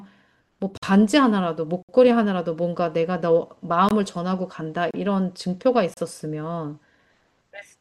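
Gaps between stream segments at 0.77, 1.83, 3.89, 4.91 and 5.94 s insert hard-edged silences of 21–62 ms at 1 s boundaries; unlike dropouts, no speech is lost.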